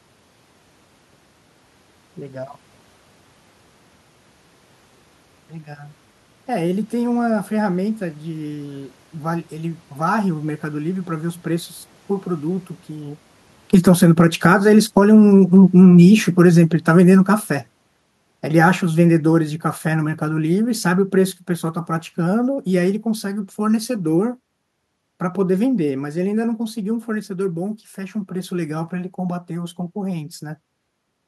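Automatic gain falling runs from 13.58 s to 27.05 s in this speech recording. The automatic gain control judged the input too loud, or its background noise too strong, and lowered its gain gradually, by about 22 dB over those thirteen-odd seconds. The level sinks steadily, and the room noise sinks along with the voice instead of holding steady. Shortly before, around 13 s, the talker's distance from the microphone changes, which is ordinary movement rather than a system fault.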